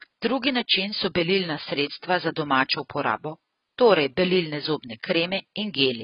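From start to finish the speech sounds dull and boxed-in, with nothing above about 5.1 kHz, and sustained vowels and sibilants carry a warbling, fizzy texture. The likely cause is heavy AAC compression. An AAC-LC encoder starved of bits, consistent with a rate around 16 kbps, drops the upper band entirely and quantises the remaining spectral lines so coarsely that gaps open between them or get filled with substitute noise.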